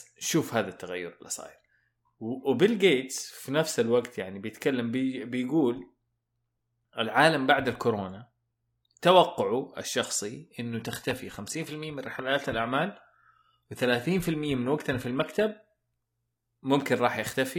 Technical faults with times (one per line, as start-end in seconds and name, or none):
10.69-16.69 adaptive stream at a lower bitrate